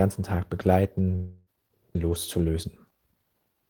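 A speech recording with a long network dropout, likely, from 1.15 to 1.49 s: about 320 ms of audio is lost and filled with a fading buzz or hiss that smears the preceding sound. A spectrogram shows blurred, decaying horizontal bands, then an abrupt jump to resumed speech.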